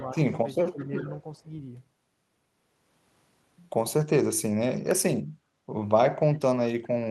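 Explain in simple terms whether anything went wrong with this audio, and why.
In the first second and a half of this speech clip there is echo leak: from 0.0 to 0.34 s, 0.57 to 0.86 s and 1.15 to 1.37 s, a faint copy of the voice returns about 0.38 s late. The likely cause is a loudspeaker echo canceller letting part of the sound back through.

There is also speech suppressed in double talk, between 0.58 and 1.07 s and again from 1.37 to 1.49 s. The voice briefly dips, mildly at first and more sharply the second time, likely because the echo canceller turned down everything while both sides overlapped.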